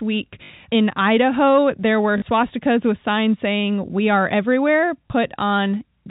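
Packets were lost three times, and the receiver filled each gap by replaying the last packet it had, which is packet loss with last packet repeated. The repeats fall out of step with the pitch. At 0.44 to 0.50 s a 60 ms gap gives a brief robotic buzz near 50 Hz, which fits 20 ms packets. After "there were", 2.18 to 2.22 s stutters for 40 ms. After "are everywhere", 5.08 s gives a small blip, over the telephone-band G.711 sound.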